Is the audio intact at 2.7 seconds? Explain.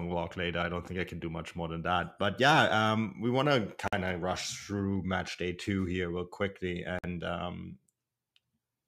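Yes, at 2.7 seconds the speech plays through cleanly, with no dropout, click, distortion or other fault at that moment.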